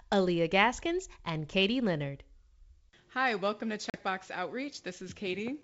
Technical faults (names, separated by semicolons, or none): packet loss on an ADPCM call